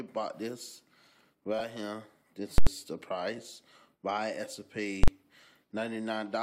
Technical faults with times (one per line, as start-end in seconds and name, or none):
1.59-1.61 lost LE Audio frames
2.58-2.67 invalid numbers at full scale
3.38 lost LE Audio frames
5.03-5.08 invalid numbers at full scale